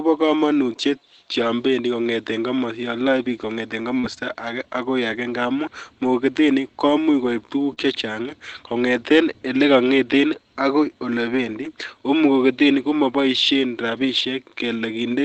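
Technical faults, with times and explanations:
3.99–4.05 s and 7.73–7.79 s, short concealed packet loss: about 40 ms of the stream arrived too late to decode each time, so the receiver extended the preceding sound for roughly 35 to 39 ms and blended back, heard as a brief smear or wobble where a short sound can disappear.
4.03–4.05 s, 7.77–7.83 s, 11.33–11.67 s and 13.93–14.07 s, lost packet rebuilt from error correction: lost frames were replaced by the lower-quality backup copies carried in the following packets, so there is no gap. The rebuilt stretches last 20, 40, 180 and 80 ms and sound rougher and noisier than the surrounding Opus-coded speech, which is limited to 8 kHz.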